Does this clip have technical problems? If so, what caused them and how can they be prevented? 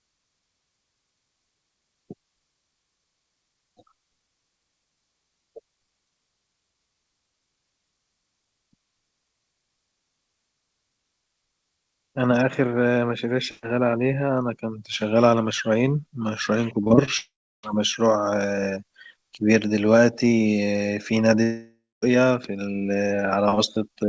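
Yes. From 16.84 to 17.09 s there is repeated packet loss (robotic sound). Four short packet gaps, none longer than 20 ms, were each patched by stretching the preceding audio, so about 29% of that quarter-second is synthetic fill, which gives it a choppy texture with pieces missing. A jitter buffer with more headroom, or forward error correction, would prevent this.

Right after that, from 17.17 to 17.65 s, and again from 21.43 to 22.04 s, the sound turns into a fading buzz or hiss and then goes silent for 0.33 s and 0.22 s. When it resumes, a stretch of audio is simply gone. This is likely a long network dropout, with the receiver extending the last sound until it gave up. A more stable network link, such as wired rather than congested wireless, would prevent it.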